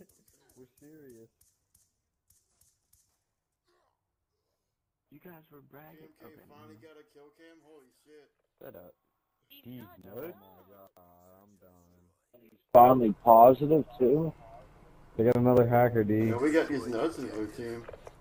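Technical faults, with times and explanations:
0.0–12.75 s, one channel inverted: summed to mono, the shared centre content drops by about 32 dB, leaving only a faint copy from the mismatch between channels; a likely reversed-polarity channel, unlike a plain level drop.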